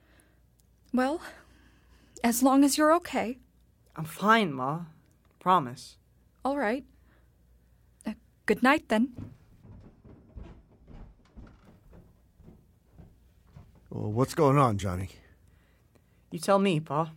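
At 9.99 s and 15.01 s, overlapping chunks cause a stutter. The audio was handled in 5 s blocks, each starting 20 ms before the previous one ended, so that slice plays twice. The waveform shows a repeated 20 ms stretch, and the spectrogram a thin vertical line.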